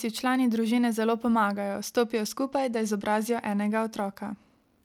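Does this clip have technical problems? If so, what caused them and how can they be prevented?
Yes. From 1.69 s to 4.77 s, right after "člani družine zelo", there's a Bluetooth SBC bit pool drop: the voice loses its treble and picks up a gritty haze. That points to the encoder falling from a bit pool near 28 to about 13, roughly 102 kbps, starving the upper sub-bands. To prevent it, keep the link uncongested by staying close to the receiver and away from Wi-Fi or other Bluetooth traffic.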